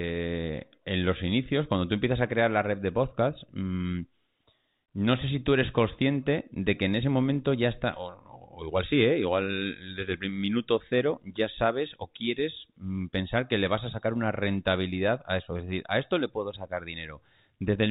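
No technical faults occur anywhere in the speech, which comes through the narrow band of G.711 telephone coding.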